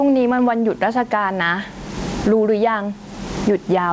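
Gain pumping runs throughout this speech clip, with a gain swing of roughly 25 dB; the room noise sits about 39 dB below the speech. The likely cause is microphone gain set far too high, with a fast limiter or compressor clamping down on every peak and releasing in the gaps. The result is squashed dynamics, with loud and quiet passages pushed close together in level. Nothing is heard above 8 kHz, which fits a wideband call codec such as G.722 at 64 kbps.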